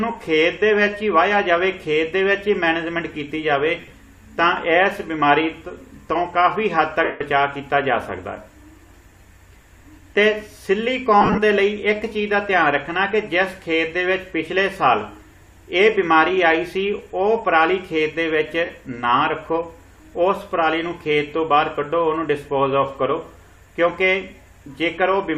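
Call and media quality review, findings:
Lost LE Audio frames at 3.80–3.93 s (75 ms lost, scattered over 120 ms, longest run about 30 ms), 7.04–7.21 s (165 ms continuous), 11.21–11.38 s (105 ms over 165 ms, longest run about 40 ms), and 18.65 s (45 ms). The gaps fit 7.5 ms LC3 frames. The decoder conceals each gap by reusing the last spectrum with randomised signs, so tonal content smears into noise. The concealment fades after the first few frames.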